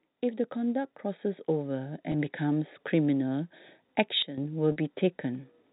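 From 0.06 s to 2.43 s, automatic gain rising lifts the level by about 9 dB. The gain control judged the input too quiet and raised its gain slowly. Speech and background noise swell together over more than two seconds, with no step in the sound. On a waveform the envelope widens steadily across that span. On a spectrogram the whole band, including the noise floor between syllables, brightens gradually.

Inside that rise, at 2.12 to 2.14 s, there is packet loss with pitch repetition. About 20 ms is missing, which fits one lost packet. The receiver filled the gap by repeating the last pitch period and fading it out, so the sound briefly holds a slightly buzzy, static tone. On a spectrogram the harmonics run flat for a moment instead of following the natural pitch movement. A waveform shows identical cycles repeating.

From 4.22 s to 4.38 s the level falls abruptly by about 12 dB and then returns, with speech and noise dropping together from one sample to the next. 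The likely cause is a sudden gain jump, a digital gain change applied without a ramp. A waveform shows a sharp rectangular notch in the envelope. A spectrogram shows a uniform darkening across all frequencies with vertical edges at both ends.

At 4.72 to 4.76 s, a second packet loss with pitch repetition covers about 40 ms, consistent with two lost packets. Over this longer gap the repeated pitch cycle fades toward silence before the speech returns through a short cross-fade. The waveform shows repeating cycles whose amplitude decays, then a blended re-entry. On the spectrogram, frozen harmonics thin out and the speech resumes. Throughout, the G.711 telephone coding limits the band to below 4 kHz, leaving an empty region above that line on the spectrogram.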